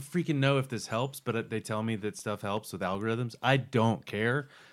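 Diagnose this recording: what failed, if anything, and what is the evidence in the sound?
Playback from a damaged disc failed. A scratch or blemish wiped out more data on each rotation than the player's error correction could rebuild, so the player interpolated or muted those samples. The evidence is CD scratch ticks in the speech between 1.81 and 3.14 s: eight short, evenly spaced ticks, about six per second, each at most a few milliseconds long. The steady spacing matches one revolution of the disc per tick.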